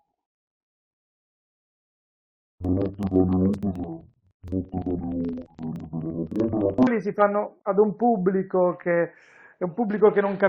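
Interleaved audio read as planar affects this speech clip from 0.0 to 6.9 s. Each 42.67 ms block of alternating left-right samples is split into halves, both played at half speed, so the speech sounds an octave low, doubled and choppy, chopping at 23.4 Hz.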